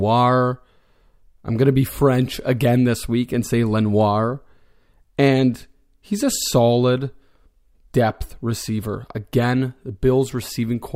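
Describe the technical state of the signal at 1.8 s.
At 1.8 s the speech signal is intact, with no audible technical fault at that moment.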